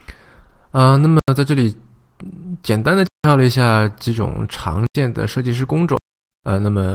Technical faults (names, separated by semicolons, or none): block of digital silence